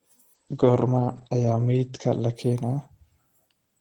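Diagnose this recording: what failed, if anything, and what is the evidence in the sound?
A call bitrate drop at the codec stage, driven by the network's bandwidth estimate, begins at 0.35 s and lasts to the end of the clip. The speech turns rough and watery, and the top end collapses from a full 20 kHz band to a cut-off near 8 kHz, which fits the encoder being pushed from about 64 kbps down to 10 kbps. With so few bits, Opus quantises coarsely and discards high frequencies. The worst stretch lasts about 1.1 s, and the bitrate doesn't recover before the clip ends.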